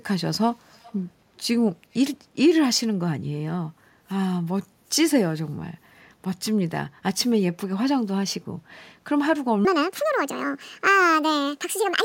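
From 0.65 to 1.0 s there is an echo leak: a faint copy of the speech, around 30 dB down, returns 323 ms late, likely from a far-end loudspeaker the echo canceller missed. From 9.65 s to the end, a section at the wrong speed plays 1.66 times too fast, pushing the speech roughly ten semitones higher and hurried, likely from playback on a mismatched clock.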